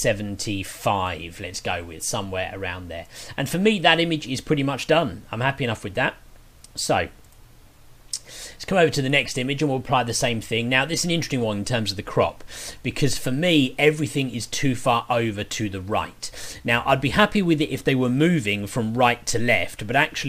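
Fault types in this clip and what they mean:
Sample clock jitter: The converter's clock wobbles, so each sample is taken slightly early or late. From 13.26 s to the end, the timing error is a few microseconds. The resulting error grows with how steeply the waveform is changing. Loud and bright passages therefore take on a grainy hiss or roughness. That noise sits about 30 dB below the sound. It rides on the signal rather than forming a steady background.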